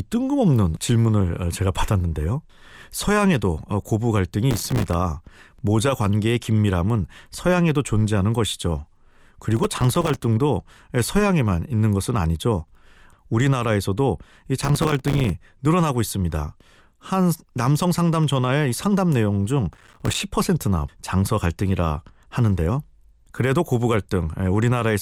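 Processor overload crackle at 4.51–4.93 s, 9.57–10.24 s, 14.60–15.30 s and 19.73–20.20 s: dozens of buffers of a few milliseconds each miss their deadline and drop to silence, leaving hard-edged gaps that sound like gritty tearing over the speech.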